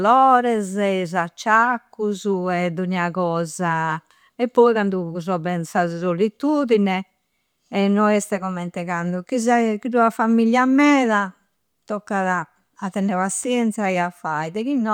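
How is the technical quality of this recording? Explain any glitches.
The recording has one glitch, near the end of the speech. An electrical switching spike occurs at 13.43 s: a sharp snap, lasting under two hundredths of a second, laid over the sound and peaking moderately, at roughly -25 dBFS. Its likely cause is a nearby switch, motor or static discharge arcing briefly, with the audio line picking up that burst of interference. The result is a hard, dry click unrelated to the speech beneath it.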